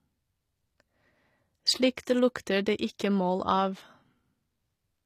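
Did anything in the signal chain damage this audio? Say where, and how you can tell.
Yes. The damage is at the codec stage, throughout the speech: the treble sounds rebuilt rather than recorded, most likely from HE-AAC compression at a low bitrate around 24 kbps. The upper band is copied from lower frequencies, so its harmonics misalign and s sounds turn gritty and lispy.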